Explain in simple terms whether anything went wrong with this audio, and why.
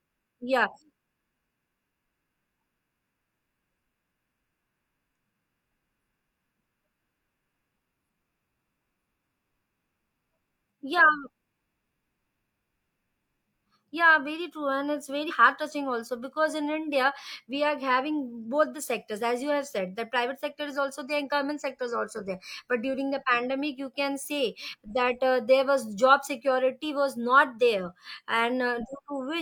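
Something did go wrong: compressed frames were skipped. At about 15.25 to 15.31 s, right after "true and it's", the decoder failed to play one block of the compressed audio, either because it was missing or because it was rejected as damaged. The sound then jumps ahead by roughly 40 ms, which fits a single 42.7 ms frame, before continuing with "heart touching also because".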